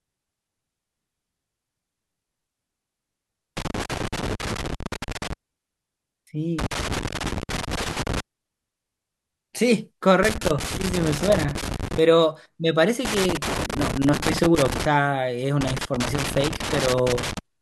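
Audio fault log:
3.57–5.33 s, 6.59–8.20 s, 10.23–11.99 s, 13.05–14.85 s, 15.61–17.39 s: loose connector crackle. Each burst lasts roughly 1.6 to 1.8 s. A worn contact making and breaking repeatedly chops the speech signal, and any DC on the line adds pops, giving the irregular scratching crackle.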